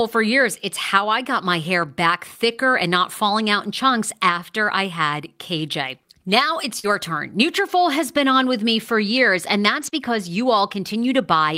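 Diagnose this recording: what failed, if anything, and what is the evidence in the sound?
Short concealed packet loss on the network: missing audio was continued from the preceding speech, leaving brief smears at 6.79 s (40 ms) and 9.90 s (20 ms).

Lost packets rebuilt from error correction: low-bitrate backup copies fill 6.84–6.86 s and 9.82–9.88 s without gaps, so the speech sounds rougher and noisier there.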